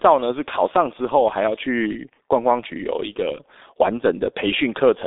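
A G.723.1 codec, squeezing the speech to what sounds like about 6 kbit/s in 30 ms frames, leaves it muffled and hoarse throughout, with nothing above 3.8 kHz.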